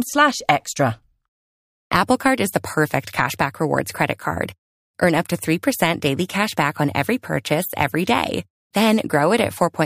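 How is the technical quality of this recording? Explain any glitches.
The technical quality of this recording is sound, with no glitches to explain.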